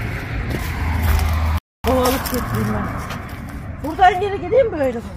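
At 1.58 s the sound cuts to silence for about 260 ms, resuming at 1.84 s: a playback stall, likely the player starved of data or blocked.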